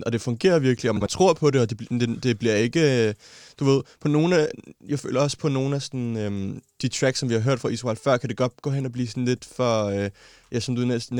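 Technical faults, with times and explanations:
0.96–1.07 s, frames out of order: Two adjacent blocks of about 46 ms each were swapped, which fits a pair of two-frame runs arriving in reverse order and being decoded as received. This short stretch of speech therefore plays its second half before its first, giving a brief garbled flutter. No time is lost, and the speech continues in sync afterwards.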